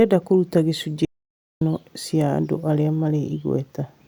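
At 1.05 s, after "kũruta gĩcunjĩ", the speech cuts out abruptly. This is an audio dropout to silence. For 0.56 s there is silence, with no room tone. The input was likely lost while writing continued. Speech returns at 1.61 s with "cia andũ arĩa".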